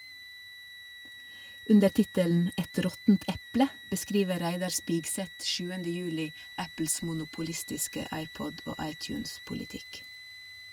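A speech clip with a switching supply whistle running through the whole thing: a thin tone near 2 kHz, wandering between about 1.93 and 2.04 kHz, sitting roughly 20 dB under the speech. That's a switching power supply running in audible burst mode or beating with another one, its pitch shifting with load.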